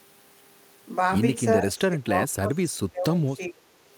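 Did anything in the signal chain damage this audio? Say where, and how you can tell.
Yes, and it happens at the call-processing stage. From 1.58 s to 3.61 s the speech keeps ducking, dropping by roughly 25 dB at its deepest and cutting out in pieces that add up to around a second and a half. That's speech suppressed in double talk. The likely cause is an echo canceller that couldn't tell this talker apart from loudspeaker echo while both sides spoke, so it pulled the level down on everything.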